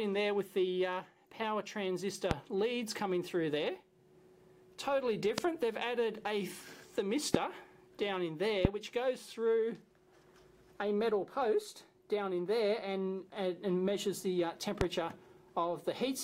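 A loud pop sounds at 2.31–2.34 s, then at 5.38–5.40, 7.34–7.37, 8.65–8.67 and 14.81–14.84 s. Each is a single sharp thump lasting about 23 ms, peaking around 20 to 25 dB above the sound. That fits a brief voltage pulse, likely from a switch, static or driver glitch, added to the signal. Unlike a dropout, nothing is lost; the sound carries on beneath each pop.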